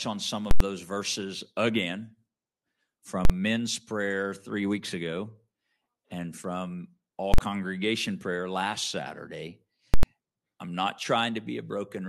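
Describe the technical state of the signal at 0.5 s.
At 0.51 s, right after "on some", the signal hits invalid numbers at full scale until 0.60 s. A calculation returned infinite or invalid values, pinning the output at its extreme for about 93 ms, which fits a 4096-sample block. It is heard as a loud pop at each edge with silence between, before "those verses again".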